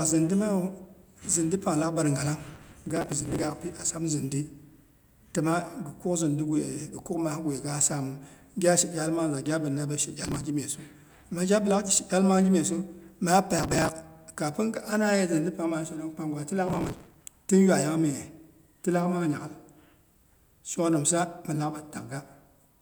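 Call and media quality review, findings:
Processor overload crackle, speech, four bursts: 2.44–3.44 s, 10.25–10.44 s after "mangza gabina be she", 13.59–13.89 s, 16.68–17.31 s after "panggwa tilaak". Gritty tearing over the speech. Probable component: audio processing thread missing its deadlines, skipping dozens of short buffers in a row, around 5 ms each, leaving tiny hard-edged gaps. Waveform: dense dropouts to silence with abrupt edges. Spectrogram: broadband vertical streaks across each burst, stopping cleanly when the load passes.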